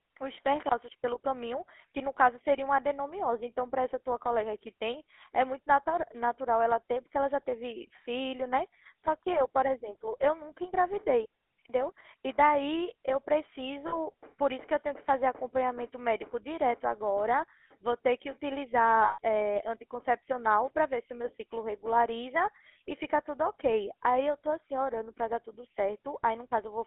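Throughout, a GSM full-rate codec rebuilds the speech from sparse pulse excitation within a 300 Hz to 3.4 kHz band, leaving a plainly buzzy, gravelly roughness. From 13.88 to 13.96 s and 19.04 to 19.19 s, lost GSM frames are filled by repeating the last good frame, freezing the sound into a rough metallic ring lasting 40 ms, then 140 ms.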